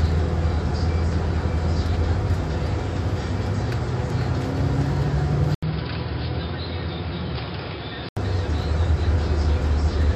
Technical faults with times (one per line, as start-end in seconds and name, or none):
5.55-8.17 input switched to a poorer device